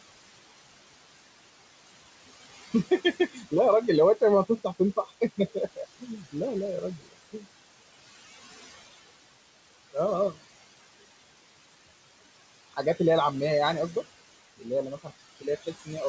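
Noise suppressor artifacts run throughout: background noise drops about 18 dB between phrases, leaving a residue that shows as patchy, gated bands on a spectrogram. Speech cut by the noise suppressor occurs at 3.13–3.53 s, 4.21–6.35 s, 6.81–7.44 s and 15.03–15.89 s. Soft speech is mistaken for noise and pulled down by up to about 20 dB, so it sounds swallowed, with sudden waveform dips and faded spectral detail.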